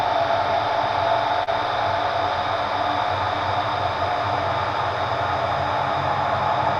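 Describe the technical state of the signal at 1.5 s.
Just before 1.5 s, from 1.43 to 1.49 s, the signal has a short concealed packet loss. About 40 ms of audio never reached the decoder in time, and the receiver covered roughly 34 ms of that gap by extending the sound that came right before it, then blended back into the real signal. The result is a brief smeared continuation rather than silence, with a soft join where the concealment ends.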